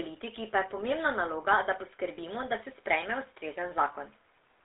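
Across the whole clip the speech carries GSM full-rate codec damage, consistent with 13 kbps full-rate coding. The codec rebuilds the voice from a vocal-tract model excited by sparse regular pulses, giving a plainly audible buzzy, gravelly texture, and the band runs only from 300 Hz to 3.7 kHz.

From 2.16 to 2.19 s, just before "da se", lost GSM frames are heard. The decoder repeats the previous good frame's parameters, so the sound briefly holds as a rough metallic ring. The gap length fits a single lost 20 ms frame.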